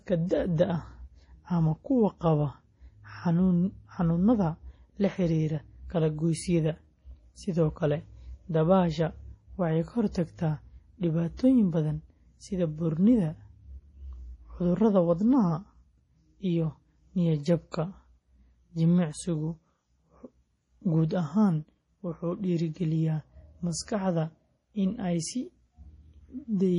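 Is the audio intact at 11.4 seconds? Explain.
No. From 11.37 to 11.39 s, just before "badan sida buurnida", a transform codec spread its quantisation noise across the block ahead of a sharp attack. This pre-echo puts a brief 24 ms hiss in front of the onset and softens it. Throughout this moment, heavy MP3 compression, likely from a low bitrate around 32 kbps, removes everything above 10.6 kHz and switches weak frequency lines on and off, leaving the sound dull and watery.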